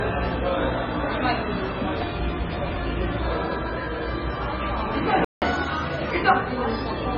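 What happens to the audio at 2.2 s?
MP3 compression at 2.2 s, as across the whole clip: the encoder lets weak frequency lines flicker between frames, so the sound turns watery and swirly with smeared attacks, likely from a starved bitrate near 16 kbps.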